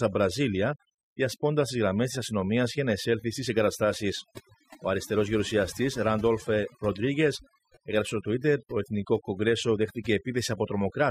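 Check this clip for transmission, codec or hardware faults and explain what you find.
The one fault here is overdone noise removal, present for the whole speech clip. A noise reduction stage set far too aggressively pushes individual frequency bands down or out whenever they sit close to its noise estimate, and the quieter parts of the speech get taken along with them. The background drops and is flecked with twinkling specks. Unlike a noise gate, which mutes everything at once between phrases, this removal works band by band, so the twinkling persists.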